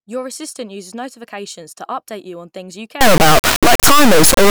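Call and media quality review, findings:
Integer read as float, 3.01 s to end of clip, right after "you on things you". Symptom: extremely loud buzzing square wave, dropping to silence in the quietest gaps. Probable component: sample-format conversion or decode stage. Mechanism: 32-bit integer samples interpreted as 32-bit float. The misread bit patterns become values that are near zero, invalid, or far past full scale, so output jumps between silence and the clipping limit.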